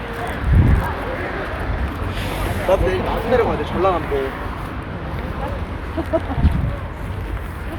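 No technical faults can be heard anywhere in this recording of sounds. Nothing in it breaks, drops out or is disturbed at any point.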